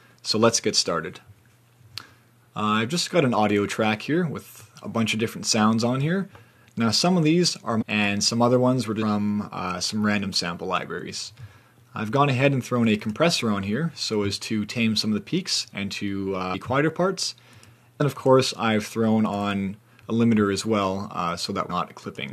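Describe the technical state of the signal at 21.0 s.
At 21.0 s the signal is intact, with no dropout, distortion, glitch or other fault to be heard at that moment.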